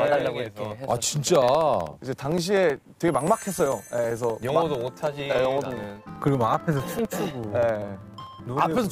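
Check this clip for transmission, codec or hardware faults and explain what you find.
The clip has one fault: periodic USB or driver dropouts. They run from 0.08 s to 8.84 s and repeat every 64 ms, about 150 in all. Each time, a background task stalls the USB bus or audio driver. Roughly two milliseconds of audio go missing and are filled with silence. The evenly spaced gaps produce a steady train of ticks, about sixteen per second. They are heard only while signal is present.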